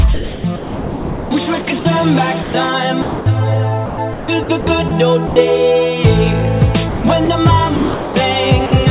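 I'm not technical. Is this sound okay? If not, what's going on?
No. The sound keeps cutting out in short gaps, and a steady hiss fills each gap.

The first problem is sound chopped by the voice detector. Between 0.14 and 1.85 seconds, 2.42 and 3.26, 3.86 and 5.36, and 6.89 and 8.15, the sound has holes. Artificial background noise fills them. The biggest loss is in the first stretch, about 1.2 seconds in total. The likely cause is the sender's automatic detector. It decided some quieter parts were just background and stopped sending them.

The second problem is sound dropped by the voice detector. At 8.66 seconds, a 60-millisecond piece is missing. Steady filler noise plays instead, and then the sound returns at 8.72. This likely happened for the same reason: the detector briefly judged the sound to be background and paused.

The audio also came through a phone-style call connection, which removes everything above 4 kHz. 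Because of that, it sounds a bit muffled throughout.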